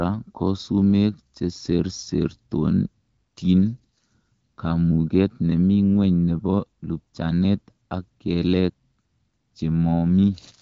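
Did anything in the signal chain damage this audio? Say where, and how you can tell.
No, nothing in the chain damaged the speech: it carries the band limit near 7.5 kHz and the light coding character of the AMR wideband (HD Voice) codec working normally, which fits a rate of 12.65 kbit/s, where that codec keeps speech clear.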